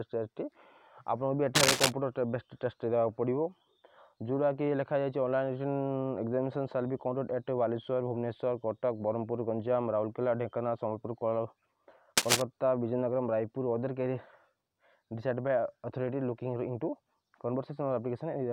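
Cable scratch noise at 1.55 to 1.92 s and 12.17 to 12.42 s: dense, uneven scratching bursts louder than the sound, likely from a worn, moving connection changing contact resistance.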